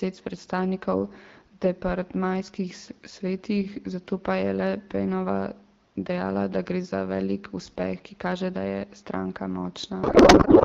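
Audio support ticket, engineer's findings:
Codec payload misread, 10.03 s to end of clip (10.64 s). Speech abruptly replaced by garbled noise and warble barely tracking the talker. Probable component: AMR-WB depacketiser. Sender and receiver disagree on bit packing, so fields are decoded from the wrong offsets. Fits octet-aligned frames parsed as bandwidth-efficient. Speech before 10.03 s is clear at the 12.65 kbit/s AMR-WB rate, light coding texture only.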